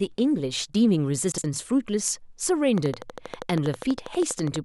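From 1.32 to 1.44 s, the speech briefly jumbles. These are chunks out of order. One 60 ms chunk plays one chunk late, after the one that should follow it. Nothing is missing. The swap leaves three hard joins around a garbled moment.

From 2.78 to 4.57 s, a train of clicks runs over the speech. The ticks come at a regular 12.4 per second, about twenty in all. They peak around 5 dB above the speech. Interference from nearby equipment or a faulty connection is the likely cause.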